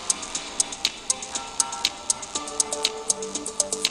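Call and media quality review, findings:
No dropouts, level jumps, distortion or timing irregularities are audible anywhere in the signal.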